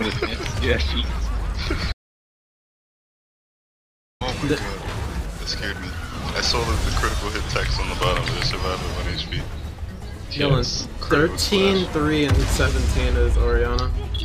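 The sound cuts off abruptly at 1.92 s and returns mid-flow at 4.21 s, leaving about 2.3 s of silence with no room tone, an audio dropout to silence. Likely the input was lost, through a disconnected device, failed link or stray mute, while the recorder kept writing silence, so whatever occurred in that span is gone.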